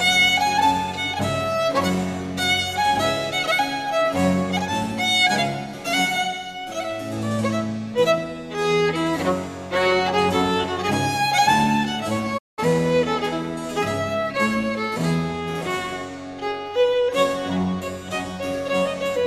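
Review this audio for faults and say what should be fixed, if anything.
A digital broadcast dropout runs from 12.37 to 12.60 s. The audio fades out over about 20 ms and mutes while the receiver discards bad frames, losing roughly 192 ms of programme, which fits a run of about eight corrupted frames. Improving reception margin and adding error protection or interleaving would prevent this.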